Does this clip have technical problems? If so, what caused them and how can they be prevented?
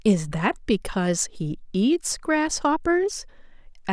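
No, there are no technical problems to report here.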